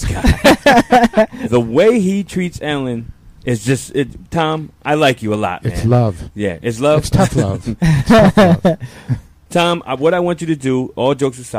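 No technical faults are audible.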